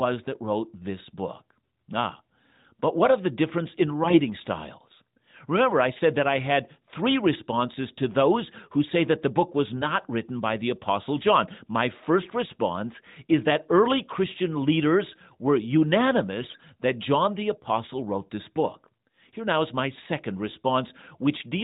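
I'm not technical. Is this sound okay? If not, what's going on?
No. The speech briefly turns hoarse and gargly from 4.02 to 4.20 s, 16.40 to 16.62 s and 20.48 to 20.57 s. These are AMR bit errors: a weak mobile link scrambled some bits of the phone-call coding, so the voice sounds scratchy there.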